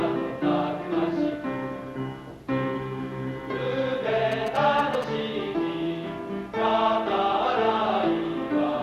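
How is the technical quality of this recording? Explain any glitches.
One glitch stands out: GSM signalling bursts from 4.32 to 5.04 s. A nearby 2G phone's radio bursts are rectified into a galloping dit-dit-dit of short buzzes at 217 Hz, about 10 dB below the main sound. Unlike steady mains hum, it comes in grouped bursts and then stops.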